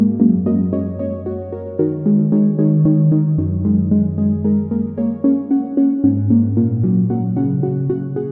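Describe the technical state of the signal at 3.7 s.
At 3.7 s the signal is intact, with no audible fault at that moment.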